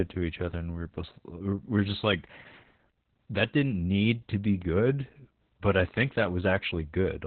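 Speech coded throughout with Opus voice compression in its SILK linear-prediction mode at a very low rate, which fits about 8 kbps: the band is cut to narrowband, near 4 kHz, and the excitation is coarse, leaving the speech heavily muffled, hoarse and slightly robotic.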